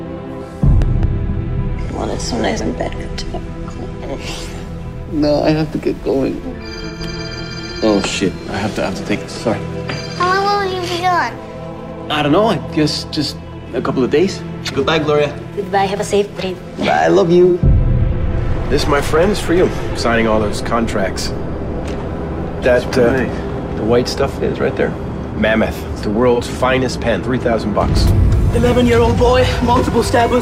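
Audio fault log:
0.82–1.05 s, loud pop: A sudden voltage step, likely from a plug, switch or static discharge, entered the chain, and the circuits after it shaped it into two sharp pops, peaking roughly 10 dB above the programme, while the sound carries on underneath.
6.88–6.99 s, 17.46–17.57 s, 26.34–26.40 s, AAC frame loss with concealment: Chunks of the compressed stream went missing and the decoder patched the gaps from the last good spectrum, giving brief smeared, noisy patches. The first two gaps last about 85 ms, which fits two frames, and the third about 43 ms, which fits one.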